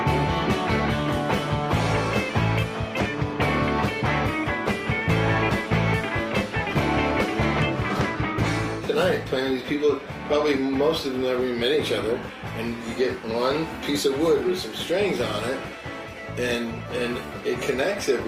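No technical faults are audible.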